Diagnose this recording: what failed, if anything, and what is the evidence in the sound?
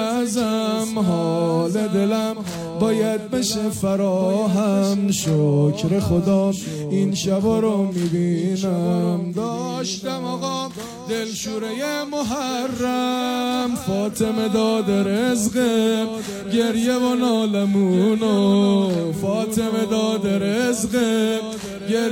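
Nothing failed; no stage shows any audible fault.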